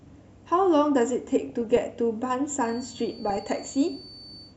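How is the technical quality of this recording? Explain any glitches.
The technical quality is poor, with codec damage throughout, two short bursts of corruption, and a high whistle in the second half.

MP2 compression: The whole clip sounds dull and granular, with a gurgling edge on the speech. This is likely MP2 coding at a low rate, consistent with roughly 80 kbps, where upper sub-bands drop out and the remaining ones are coarsely quantised.

DAB burbling: From 1.49 to 1.78 s and again from 3.30 to 3.48 s, burbling breaks over the speech. Bit errors, at a low rate of a few tenths of a percent, are getting past error correction, so single sub-bands get short blips of noise or jump in level for up to a frame.

Feedback whistle: From 2.57 s to the end, a thin tone at one pitch sits at 4.5 kHz, about 25 dB below the speech, swelling and fading slowly. The likely cause is a loudspeaker-to-microphone loop held just at the edge of feedback, so the tone sustains without building up.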